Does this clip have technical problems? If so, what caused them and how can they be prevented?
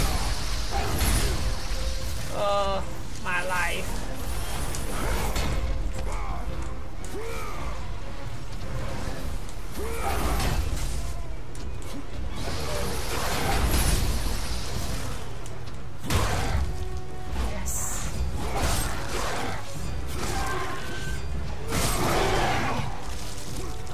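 No, there are no technical problems to be heard anywhere in this audio. With nothing going wrong, there is no cause to trace and nothing that needs preventing.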